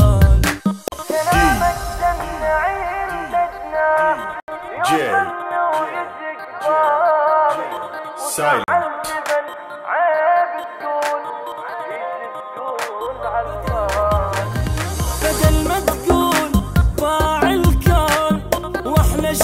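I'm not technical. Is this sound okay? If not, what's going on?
No. The sound has a block of digital silence at 0.88 s, 4.4 s and 8.64 s. For 40, 80 and 40 ms, the audio drops to complete nothing, then returns. The abrupt, unfaded edges set these apart from a smooth fade-out.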